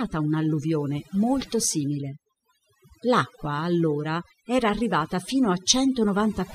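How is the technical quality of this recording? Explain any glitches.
The recording has one persistent fault: overdone noise removal, present for the whole clip. A noise reduction stage set far too strong pulls individual frequency bands down or out whenever they sit close to its noise estimate, taking quieter parts of the speech with them. The background drops and breaks up into twinkling specks. A spectrogram shows dark, empty gaps between phrases dotted with isolated bright flecks, and ragged, holed harmonics.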